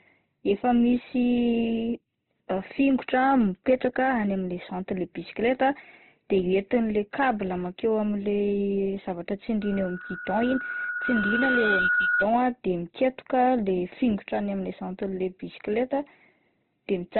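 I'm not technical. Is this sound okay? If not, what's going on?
No. Opus compression runs through the whole clip: the speech sounds muffled and grainy, like an old phone line, with nothing above about 4.1 kHz. This is likely from squeezing the audio very hard to save space, which discards the upper range and roughens what remains.

Hard clipping occurs from 2.86 to 4.08 s, just before "any amin'le". The loudest moments were slightly too big for the recording to hold, so their tops were sliced flat, adding a brief crackle on those peaks.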